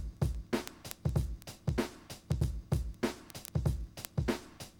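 From 0.11 s to 4.8 s, word clock ticks run through the sound at a steady rate of roughly one every 30 ms, about 150 in all. The receiving device's clock is not locked to the sender's and is off by around 700 ppm, so the two keep slipping past each other, and each slip drops or repeats a single sample. On a spectrogram the ticks appear as evenly spaced thin vertical broadband lines. The waveform shows a small step or kink at each slip.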